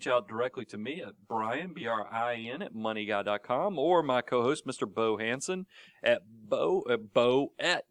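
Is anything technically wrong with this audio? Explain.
Yes. Channel delay (comb filtering) runs from 0.0 to 2.6 s. One channel arrives around 10 ms late and is summed to mono, cancelling fixed frequencies from near 50 Hz upward at regular spacing. The speech sounds hollow and phasey until the delay clears.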